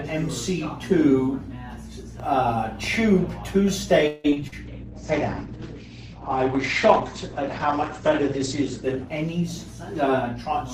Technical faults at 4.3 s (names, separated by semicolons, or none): repeated packet loss (robotic sound)